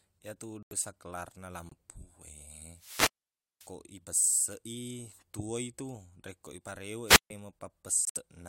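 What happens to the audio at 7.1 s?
At 7.06 s the speech hits a wireless microphone squelch dropout lasting until about 7.30 s. The analogue FM link from the transmitter weakens far enough that the receiver's squelch circuit closes and mutes its output. Within that span you hear a brief swell of hiss or static as the signal fades, then a hole of near silence of about 142 ms, and then the speech returning as the signal recovers and the squelch reopens.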